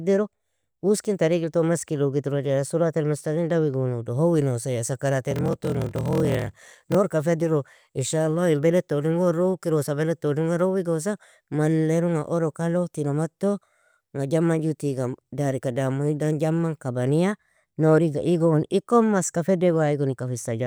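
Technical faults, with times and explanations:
5.29–6.96 s: block size mismatch (padded). Blocks that fit 1024-sample writes each end in a short run of zeros. The gaps cause a 41.7 Hz buzz until "ka federo ان". Speech slows to 0.889 of normal speed, with timbre unchanged.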